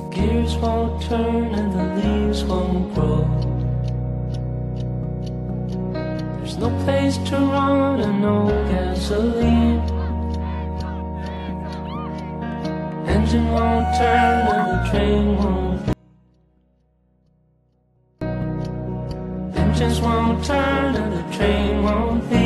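Between 15.93 and 18.21 s the wanted signal was likely lost upstream while the path after the break stayed live, causing an audio dropout to a faint residue. For about 2.3 s the sound cuts abruptly to a faint leak roughly 35 dB down, then snaps back.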